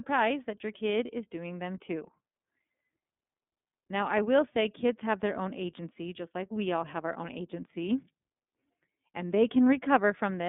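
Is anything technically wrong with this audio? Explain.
Yes, the speech runs through the iLBC codec the whole way. Nothing gets past about 3.6 kHz or below about 200 Hz, so it's muffled and thin. Each frame's excitation is coded on its own, in a way that fits the 30 ms, 13.33 kb/s mode, which leaves a clearly rough, synthetic edge.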